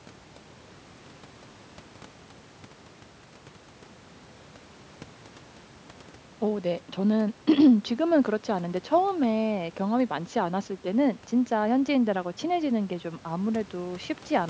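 There are no technical faults to describe in this speech clip.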